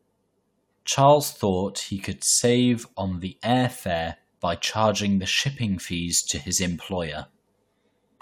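No technical faults can be heard anywhere in the clip.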